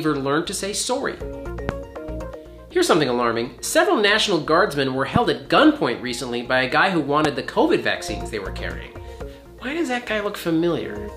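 Loud pops at 1.69, 5.16 and 7.25 s, each a single sharp crack lasting about 25 ms and peaking roughly 20 dB above the sound, which continues underneath. A sudden voltage pulse, likely from a switch, static or driver glitch, caused them.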